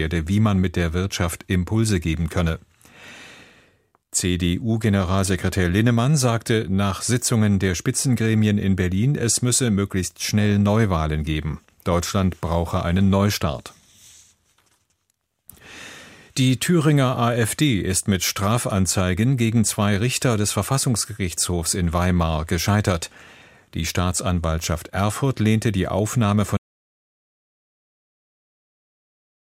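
The input feed was most likely lost at 26.57 s, whether through a dropped connection, a failed link or an accidental mute, while the recorder kept writing silence. The result is an audio dropout to silence: the sound stops abruptly mid-flow and the remaining 3.0 s, through to the end, is silence with no room tone underneath. Whatever occurred during that stretch is simply missing.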